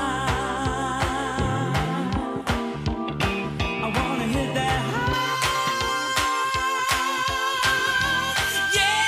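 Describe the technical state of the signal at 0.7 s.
At 0.7 s the signal is intact, with no dropout, distortion, clipping or other fault audible at that moment.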